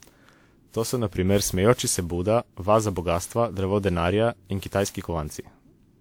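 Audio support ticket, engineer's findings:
Generation loss, whole clip: swirly, hollow speech, smeared consonant attacks, yet content still reaches 20.1 kHz, so not a starved bitrate. Likely repeated WMA 128 kbit/s re-encoding, around ten passes, each on a shifted frame grid, stacking quantisation noise and spectral holes.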